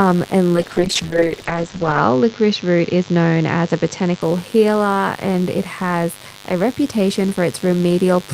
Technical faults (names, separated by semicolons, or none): mains buzz; call bitrate drop